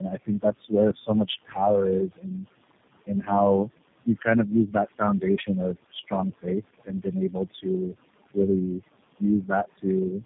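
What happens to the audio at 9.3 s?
Around 9.3 s the speech turns faint and swallowed, as if parts of it drop away into the quiet. This is speech cut by the noise suppressor, running from 9.19 to 10.22 s. The suppressor mistakes some of the speech for background noise and turns it down with the noise, by up to about 17 dB at the deepest point. Over that second, the affected stretches add up to around a third of a second.

The same moment carries noise suppressor artifacts that run through the whole clip. The room noise, which sits about 14 dB below the speech, is pulled down by about 21 dB in the gaps and rises again under the speech, because the suppressor keeps deciding, frame by frame, which bands to lower.

Tandem speech coding is also present throughout and colours 9.3 s too. The sound is rough, muffled and warbly, with nothing above 3.8 kHz. That points to the call passing through three speech codecs in a row, probably ending in G.729A, with each coder re-encoding the already damaged output of the one before, so the errors pile up.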